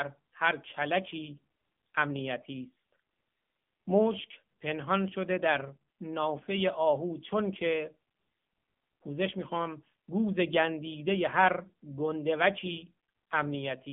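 Speech runs through the AMR narrowband mobile codec for the whole clip. Nothing passes above 3.6 kHz, the band sits roughly 150 Hz to 3.5 kHz, and plainly audible buzzy, synthetic coloration, fitting a low mode near 7.4 kbps, separates it from simple telephone-band filtering.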